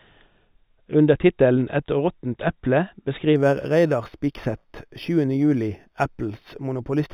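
From 3.36 s to the end, imaging from linear upsampling: straight-line interpolation, apparently from an 8 kHz rate, dulls the top and leaves faint mirror images at 4 to 8 kHz, about 35 dB down, adding metallic shimmer.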